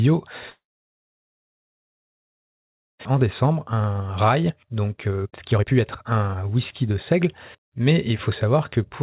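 At 0.5 s the sound stops and stays absent until about 3.07 s, which points to a long network dropout as the likely cause. The tail of the last sound is stretched briefly, then silence holds for about 2.4 s. Roughly 1.4 s of material is never played, so the speech resumes further on, with that part gone and the playout now running about a second late.

From 3.14 s to 9.02 s the receiver works that delay off with a jitter buffer speed-up. It repeatedly cuts short pitch-period pieces from the signal, so the speech runs at about 118 percent of its normal rate while keeping the same pitch. Across this stretch roughly a second of audio is dropped, and delivery sounds hurried throughout. The audio carries nothing above 4 kHz, consistent with narrowband G.711 coding on the call path.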